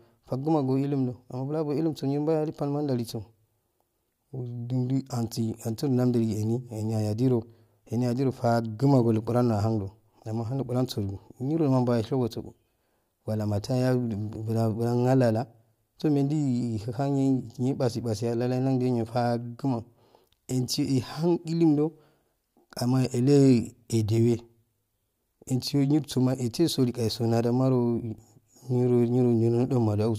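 Nowhere in the speech recording does the signal show a technical fault.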